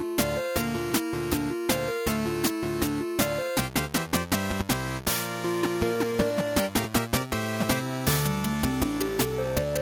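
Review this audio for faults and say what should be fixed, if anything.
Two brief clicks interrupt the sound at 3.21 s and 6.84 s. Both are repeated buffers: playback ran short of fresh audio, so the device sent its previous block out a second time. Each repeated chunk is about 5.8 ms long, which fits a 256-sample buffer, and plays just once extra. A piece that short can't be heard as a stutter, only as a hard splice, and essentially nothing is lost. To prevent it, enlarge the playback buffer or give the audio thread higher priority so data always arrives before the device needs it.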